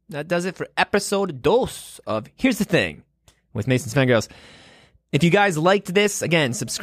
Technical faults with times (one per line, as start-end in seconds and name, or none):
none